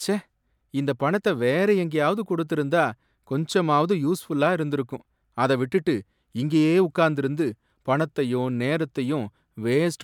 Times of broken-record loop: none

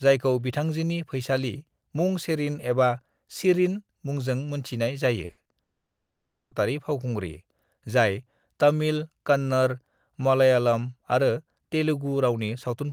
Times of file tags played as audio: none

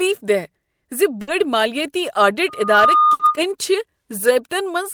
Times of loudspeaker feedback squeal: 2.48-3.39

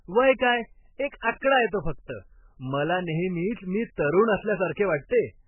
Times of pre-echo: 0.38, 1.21-1.42, 5.09-5.11

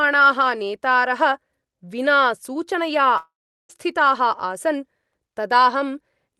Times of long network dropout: 3.17-3.70

